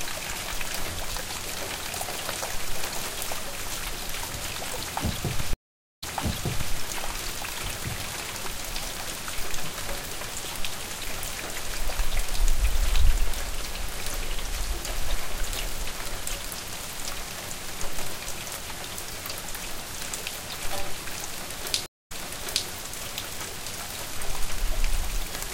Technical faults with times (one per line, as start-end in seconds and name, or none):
5.53-6.74 stream reconnect
21.86-22.68 stream reconnect